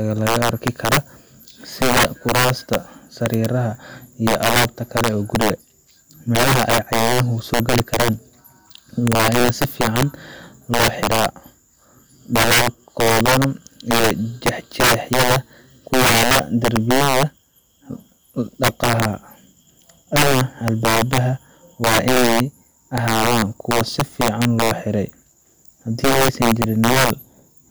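Integer overflow runs through the whole of the speech. The signal is driven about 10 dB past full scale, and instead of being limited, every peak that exceeds the largest integer wraps around to the opposite sign. Only a few percent of samples go over, so the damage lands on loud syllables as violent cracks, harsher than clipping. On a waveform those peaks jump from top to bottom of the range. A spectrogram shows bright vertical broadband streaks.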